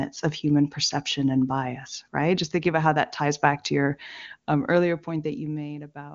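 Listening through the speech, nothing stood out as a technical problem.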